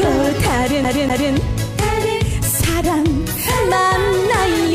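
From 0.84 s to 1.33 s the audio catches like a CD stuck on one turn. A short fragment of about 246 ms plays twice over. A brief mute falls at each jump back. A scratch is throwing the laser back to the same spot on each turn of the disc. So the player keeps rereading one track. The result is a quick, even stutter. It sounds just like a skipping CD.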